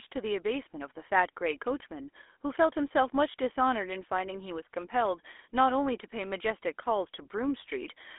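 From start to finish the speech carries the damage of the GSM full-rate codec, and it is plainly audible. The band is held between roughly 300 Hz and 3.5 kHz, so the low body and the upper air are gone. The codec rebuilds the voice from a vocal-tract model excited by a coarse, regularly spaced pulse train, leaving a buzzy, gravelly roughness on the voice, consistent with a 13 kbps full-rate link.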